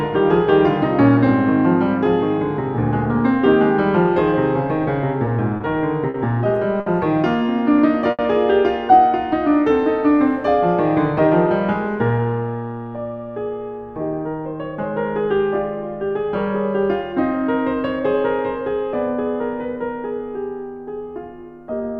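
At 5.57, 6.10, 6.80 and 8.11 s, a short stall from a late packet holds the music for 30, 40, 60 and 80 ms, then resumes without loss. Each shows as a smeared, repeated waveform stretch and flat horizontal streaks on a spectrogram. From 11.04 to 12.55 s, a jitter buffer speed-up trims pitch-period slices, running the music about 107% fast and dropping roughly a tenth of a second. The tempo hurries at unchanged pitch, and onsets crowd together on the spectrogram.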